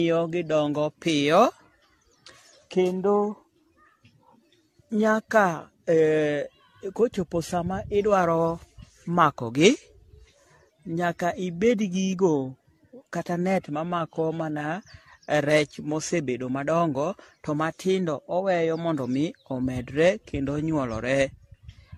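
Throughout the speech, the sound is swirly, smeared and hollow, and consonant attacks blur. Nothing is heard above 14 kHz. This is likely generation loss. The audio points to repeated AAC-LC coding near 64 kbit/s, about ten passes, with each adding fresh quantisation noise.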